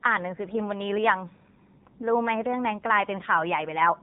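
From the first moment to the end, the speech carries the sound of the AMR narrowband mobile codec, the old 2G/3G phone-call codec. Everything above about 3.8 kHz is simply gone, so it has that muffled telephone bandwidth. The damage is plainly audible: the voice comes out buzzy and a bit synthetic, because the codec rebuilds it from a vocal-tract model fed by sparse pulses. That fits one of the lower modes, around 7.4 kbps.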